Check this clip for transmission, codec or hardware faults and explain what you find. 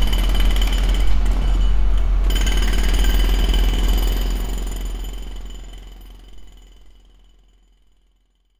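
No transmission, codec or hardware faults are audible; the only level change is a smooth editorial fade-out over roughly the last four seconds, with no click or hard edge.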